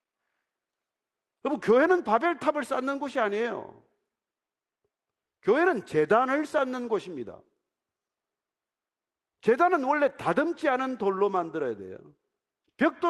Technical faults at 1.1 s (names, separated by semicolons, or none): none